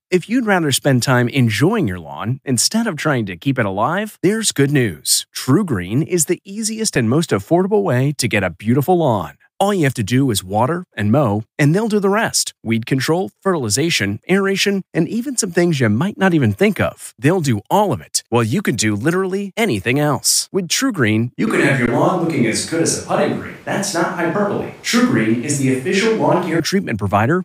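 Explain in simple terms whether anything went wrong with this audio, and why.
Yes, two kinds of problems can be heard.

The first is an underrun with held sample. At 6.96 s, between "is the easiest" and "and most affordable way", the sound briefly freezes flat. The playback buffer ran empty for a few milliseconds, about 256 samples. A tiny bit of audio is lost. The same fault happens again at 21.86 s, lasting about 16 ms.

The second is a switch to a distant microphone. From 21.47 s to 26.60 s, the sound suddenly turns roomy and hollow, with thinner bass. The loudness stays about the same. Faint room noise comes in. The likely cause is that the close microphone dropped out and a farther one took over.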